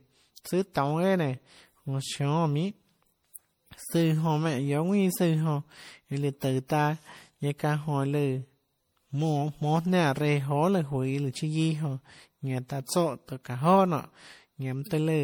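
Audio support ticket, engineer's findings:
Generation loss, throughout. Swirly, smeared, hollow speech, worse than one lossy pass would give. Consonant attacks blurred. Nothing above 20.7 kHz. Probable component: MP3 encoder chain, likely re-encoded around four times at what sounds like 64 kbit/s. Each decode-encode cycle requantises on a shifted frame grid. Noise and spectral holes stack.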